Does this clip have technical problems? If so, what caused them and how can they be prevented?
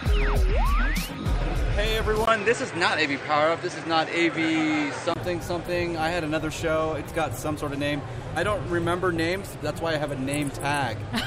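Yes. From 2.25 to 5.16 s the input likely switched to a poorer device, with a 20 ms silence at each changeover. The replacement path passes nothing above 9 kHz, so the sound turns dull, and it carries a faint new noise floor, with the overall level roughly unchanged. Locking the input device before recording prevents this.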